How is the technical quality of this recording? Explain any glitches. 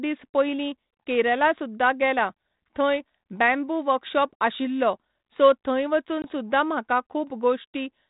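The speech travels over a G.726 ADPCM telephone path at 32 kbit/s, band-limited below 4 kHz, with one glitch. From 6.22 to 6.25 s, between "आशिल्लो सो थंय" and "सुद्धा म्हाका", there is packet loss on an ADPCM call. About 20 ms, roughly one packet, drops out and becomes silence. The decoder's predictor and step size lose track of the sender's. So a sharp-edged gap is followed by slightly distorted speech before it settles.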